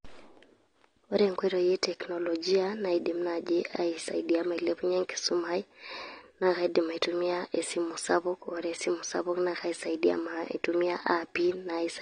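Speech carries plainly audible AAC compression from start to finish: the top end is dull, sibilants turn fizzy and smeared, and held vowels warble. Unlike a plain low-pass filter, the spectrum shows gaps and noise-filled bands, likely from AAC-LC at around 32 kbps.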